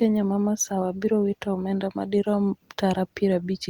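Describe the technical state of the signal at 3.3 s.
Nothing is wrong with the signal at 3.3 s; the speech there comes through intact.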